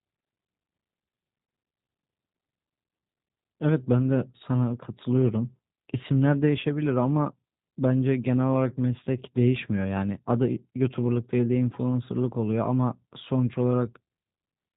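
G.729 codec coding runs through the whole speech recording, and the damage is plainly audible. The voice is rebuilt from a short-term filter modelling the vocal tract, a pitch predictor and a sparse set of pulses per 10 ms frame, so it comes out slightly rough and synthetic. Nothing above 4 kHz survives, which leaves the sound dull and narrowband. The character fits the 8 kbit/s G.729A variant.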